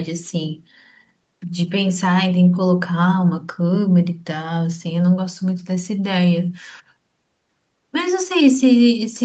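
Nothing is technically wrong with this speech clip, which has come through a call's microphone processing and an Opus call path with the sound reaching up to about 8 kHz.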